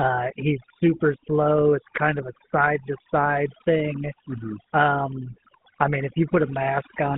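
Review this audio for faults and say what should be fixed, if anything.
Overdone noise removal runs through the whole speech clip. The denoiser pulls individual frequency bands down wherever they sit near its noise estimate, taking quiet speech detail with them. That leaves the voice over near-silence with twinkling specks. On a spectrogram, the background shows as scattered isolated dots and the harmonics as ragged, patchy streaks. A gentler reduction setting, checked by ear on the quietest passages, would prevent it.

GSM full-rate coding is also present from start to finish, with plainly audible damage that fits a 13 kbps coder. It rebuilds the voice from a vocal-tract model driven by a coarse, regularly spaced pulse excitation, which gives a buzzy, gravelly roughness. A spectrogram shows energy confined to roughly 150 Hz to 3.7 kHz, with blurred, grainy harmonics. Capturing or transmitting over a wideband path would prevent it.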